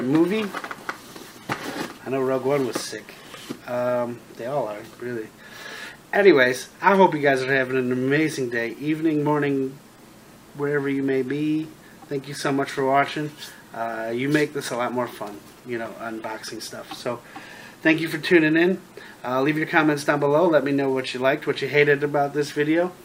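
A resampler restarted on every block runs from 15.16 to 21.36 s. The conversion, which fits a change from 44.1 kHz to 48 kHz, was done on each 40 ms block in isolation. At every block edge the converter was missing the real neighbouring samples and left a small discontinuity. These errors repeat at 25 Hz and form a low, rough buzz under the sound. The buzz rises and falls with the signal and drops away when the audio goes quiet.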